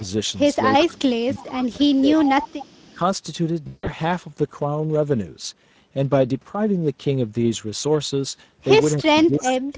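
Speex codec damage runs through this whole speech recording: at 16.8 kbps the encoder has too few bits to model the excitation properly, so the voice comes out plainly hoarse and noisy, inside a band that stops at 8 kHz as expected from the call's microphone processing. Speech suppressed in double talk appears from 0.78 to 2.4 s, where the voice sinks by up to about 20 dB across about 1.5 s; again as a brief dip of about 5 dB at 2.94 s; and from 8.99 s to the end, dropping by about 30 dB over roughly 0.7 s. The likely cause is an echo canceller that, with both sides talking at once, could not tell the near talker from loudspeaker echo and pulled everything down. Echo leak shows up as a faint copy of the voice trailing 320 ms behind at 0.8 to 0.99 s and 2.21 to 2.94 s, about 15 dB below the speech, and as short scraps around 25 dB down at 1.34 to 1.41 s and 1.61 to 1.66 s, likely residue a loudspeaker-side canceller failed to remove and sent back. 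VoIP packet loss concealed by the speech codec hits from 3.67 to 3.93 s: about 180 ms of audio went missing within 200 ms, the longest gap 160 ms, and the decoder filled it by extending its last pitch and filter into a sound that fades, with the voice staying weak briefly afterward.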